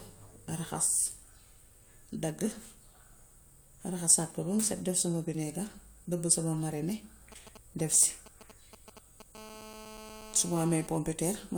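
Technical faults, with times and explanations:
7.32–9.36 s GSM signalling bursts: a nearby 2G phone's brief radio bursts, rectified by the audio circuit, gallop as short 217 Hz buzzes, roughly 15 dB down, showing as clustered vertical stripes.
9.36–10.87 s GSM phone buzz: continuous call-mode transmission pulses at 217 Hz, rectified into a raspy buzz about 17 dB below the speech, drawing evenly spaced harmonic lines across the spectrogram.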